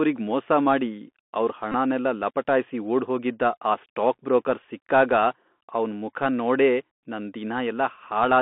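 From the start, the speech has the Bluetooth CVSD headset codec sound: narrowband, roughly 200 Hz to 3.5 kHz, with scratchy s sounds and granular hiss from the one-bit step coding.

At 1.72 to 1.74 s, between "ಮೋಸ ಮಾಡಿ ಅವ್ರ್" and "ಲಪಟಾಯ್ಸಿ ಓಡ್ಹೋಗಿದ್ದ ಆ ಸ್ಟಾಕ್", there's a brief buzz near 267 Hz. That's a Bluetooth headset packet repeated: about 18.8 ms was lost, which fits five 3.75 ms packets decoded again. At 4.63 s, right after "ಓಡ್ಹೋಗಿದ್ದ ಆ ಸ್ಟಾಕ್ ಬ್ರೋಕರ್", a shorter burst covers about 11.2 ms, consistent with three repeats.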